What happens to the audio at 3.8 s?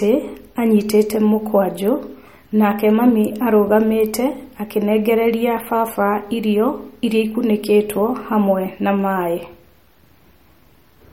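At 3.8 s the speech carries the MP3 compression damage heard across the whole clip, plainly audible and likely from a low-bitrate encode, which fits a rate around 48 kbps. Short of bits, the encoder discards everything above 16.6 kHz and drops weak frequency lines frame by frame, so the sound turns watery and swirly, with s sounds chirping metallically. A spectrogram shows a hard ceiling at 16.6 kHz and flickering holes in the quieter bands.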